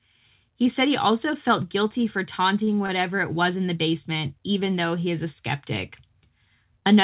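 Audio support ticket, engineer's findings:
Short stall from a late packet, two instances. Jitter buffer ran empty and the receiver stretched the last sound by about 28 ms and 26 ms, then resumed in place. Sound held with a slight buzz or dip at 2.64–2.77 s after "also felt guilty for" and at 2.86–2.91 s before "it was in the". Nothing lost. Narrowband call path with nothing above 4 kHz, consistent with G.711 A-law.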